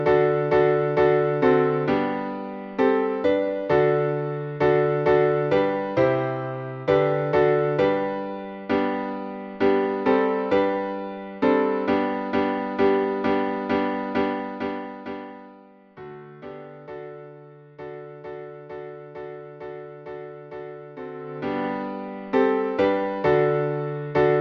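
No technical faults can be heard anywhere in the clip. The smooth level changes come through as intended, each a gradual fader-like rise or fall in level rather than a sudden jump.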